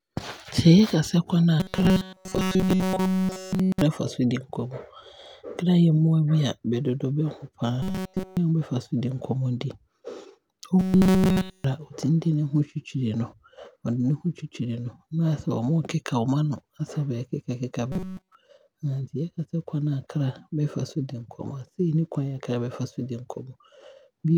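Robotic sound from repeated short buffers occurs at 1.6–3.81 s, 7.82–8.37 s, 10.80–11.64 s and 17.92–18.35 s. The speech turns into a rigid metallic buzz locked at 188 Hz, likely from an audio fragment of about 5 ms looped throughout.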